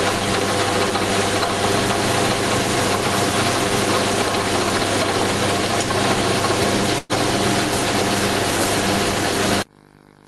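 From the start and through the whole clip there is gain pumping, with the level swinging by around 10 dB. The likely cause is input gain set far too high, with a fast limiter or compressor clamping each peak, which squashes loud and soft parts together. At 6.98 s a burst of packet loss lasts until 7.12 s. The receiver extended the last sound for about 112 ms, fading it as a held buzz or decaying hiss, and the audio then resumes roughly 120 ms further on, with that stretch missing.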